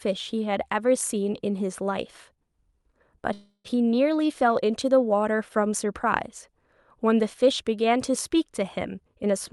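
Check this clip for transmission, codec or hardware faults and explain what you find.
Two transmission faults stand out in this speech clip, which was carried over an Opus call path whose coding limits the top end to around 12 kHz.

Call audio freeze, 3.33 to 3.76 s: packets were likely held up in transit, so the jitter buffer ran dry. The receiver stretched the last sound for about 311 ms as a fading buzz or hiss, with roughly 50 ms of silence. Speech then resumed where it stopped, delayed but intact.

Jitter buffer speed-up, 8.89 to 9.52 s: the buffer had built up surplus delay, so the receiver repeatedly cut short pitch-period slices, about a tenth of a second in total. Speech runs at roughly 115 % speed with unchanged pitch, sounding noticeably hurried.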